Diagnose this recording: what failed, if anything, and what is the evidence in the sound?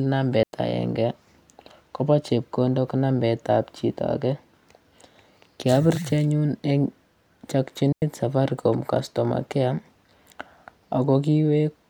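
The speech drops into two clean holes of near silence, from 0.43 to 0.53 s and from 7.92 to 8.02 s, each about 100 ms long, with no click, hiss or noise burst on either edge. That points to a digital wireless dropout on the radio link: the receiver lost too much of the incoming data stream, so rather than reproduce garbage it muted its output with a very short fade, then recovered once valid data returned.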